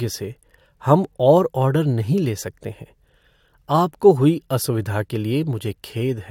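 No technical faults are audible anywhere in the speech recording.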